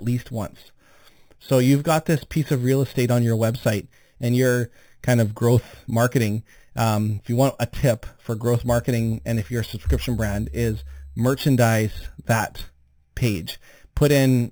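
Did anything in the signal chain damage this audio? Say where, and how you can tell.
Yes: imaging from sample-and-hold upsampling runs throughout the speech, at the sample-rate conversion stage. A metallic fizz sits about 19 dB below the speech. Its lowest copy fills 4 to 8 kHz, which points to 8 kHz audio raised to 48 kHz by repeating samples, with no filter to remove the mirrored spectrum.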